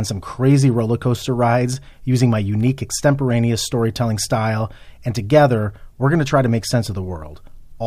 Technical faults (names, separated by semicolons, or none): none